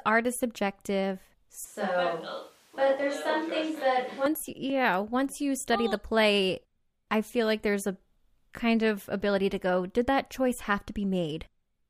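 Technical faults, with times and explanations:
1.65 to 4.26 s, switch to a distant microphone: The close pickup likely dropped out, with the recording falling back to a microphone farther from the speaker. The speech abruptly turns roomy and hollow, loses bass, and sits about 5 dB lower. Room noise rises to roughly 35 dB below the speech. That is because the distant capsule hears more reflections and ambience relative to the direct sound. The return to the close sound at 4.26 s is just as sudden.
4.70 s, block of digital silence: A tiny run of samples was replaced by zeros, typically when the output buffer isn't filled in time. The signal drops straight to digital silence for 0.73 ms, which fits a block of about 32 samples, and then jumps back with no fade. Both edges are hard discontinuities in the waveform, so the gap is far too short to hear as a hole and comes across as a single sharp tick.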